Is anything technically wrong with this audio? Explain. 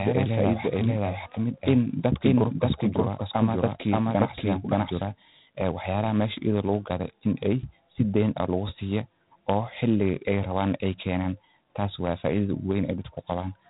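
Yes, two faults are audible.

Throughout, G.726 ADPCM coding leaves a harsh, rasping hiss that rises and falls with the speech, which fits 24 kbit/s. On a spectrogram, nothing shows above 3.8 kHz.

From the start until 5.02 s, a doubled audio track places a full-band copy about half a second behind, at roughly equal level. It likely comes from an edit holding two out-of-step copies. The waveform shows repeated shapes, and the copy ends abruptly.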